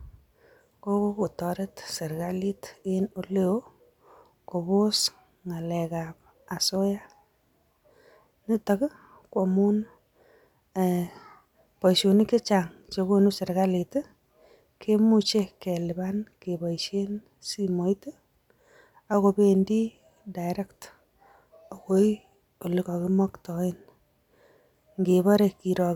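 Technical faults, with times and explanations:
No technical faults are heard in this recording.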